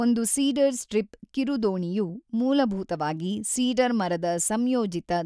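Listening to the speech recording, nothing technical stood out as a problem at any point.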